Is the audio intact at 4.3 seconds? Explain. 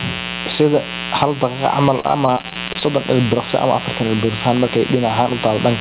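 No. At 4.3 seconds the speech carries two faults, both present for the whole clip.

A mains buzz sits about 15 dB below the speech. Sharp switching spikes, twice per cycle of 60 Hz mains, leak into the signal, so harmonics stack up across the band and are heard as a steady, raspy buzz. A plain hum would be a smooth, low tone. Here nothing above 4 kHz survives the G.711 call path.

Gain pumping is also audible. The gain swings by around 10 dB, so loud and soft passages end up squashed together. The likely cause is gain set far too high for the microphone, with a fast limiter or compressor clamping down on every peak.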